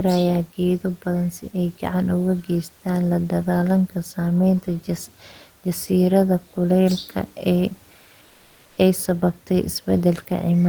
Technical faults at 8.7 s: comfort noise in place of the background

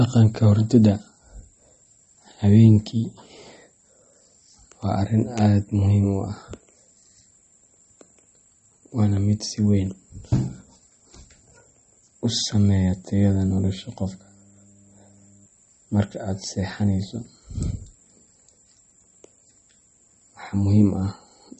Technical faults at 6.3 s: MP3 compression

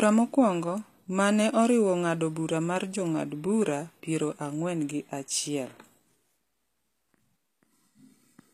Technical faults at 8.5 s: HE-AAC compression

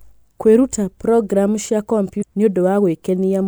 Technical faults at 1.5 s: none

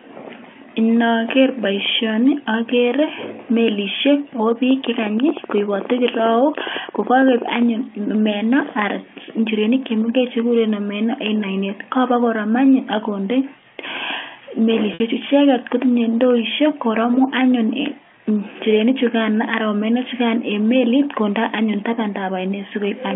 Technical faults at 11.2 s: none

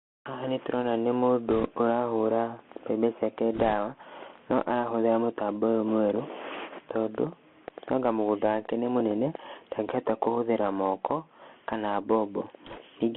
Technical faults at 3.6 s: Bluetooth CVSD headset codec; bit errors on a Bluetooth voice link

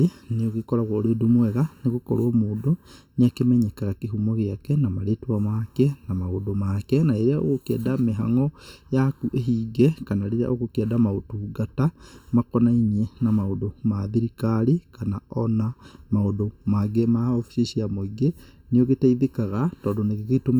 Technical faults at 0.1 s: channel delay (comb filtering)

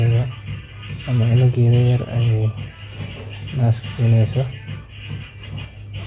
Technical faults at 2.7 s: none

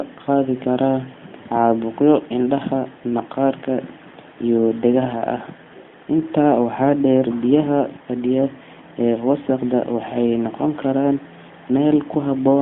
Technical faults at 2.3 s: none

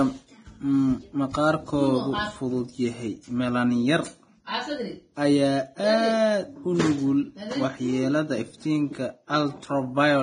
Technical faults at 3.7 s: Vorbis compression

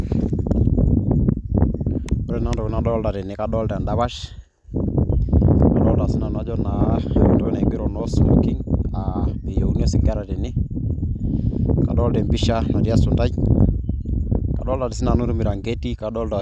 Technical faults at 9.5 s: none

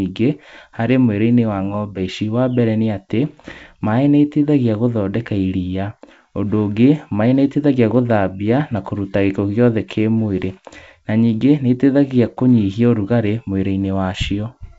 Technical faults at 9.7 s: none

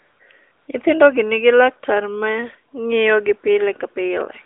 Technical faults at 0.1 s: AMR comfort noise

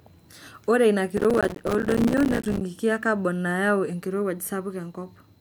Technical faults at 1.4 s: processor overload crackle

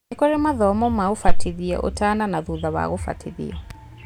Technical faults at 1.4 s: phantom power thump

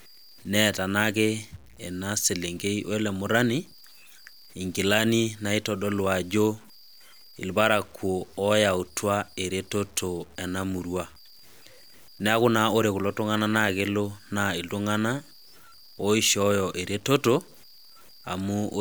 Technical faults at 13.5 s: low bit depth without dither

